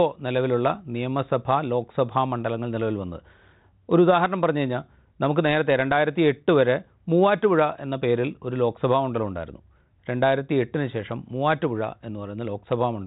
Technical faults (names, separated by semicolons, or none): none